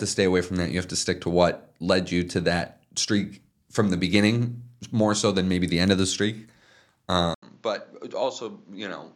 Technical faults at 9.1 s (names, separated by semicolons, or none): input switched to a poorer device